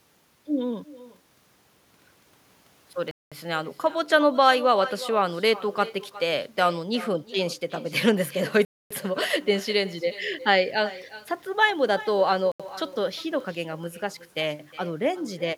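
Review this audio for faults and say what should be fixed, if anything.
Echo with no canceller runs through the whole clip. Each phrase returns roughly 0.4 s later, about 17 dB quieter and thin. The far end is playing the call on a loudspeaker, and its microphone sends it straight back. Enable echo cancellation at that end, or use headphones there.

The sound drops to silence three times: 3.11 to 3.32 s (205 ms), 8.65 to 8.91 s (256 ms) and 12.52 to 12.60 s (80 ms). It resumes after each gap. This is likely a Bluetooth stall, with the headphone buffer running empty while delayed packets are resent. Reduce radio interference or move the phone closer to the headphones.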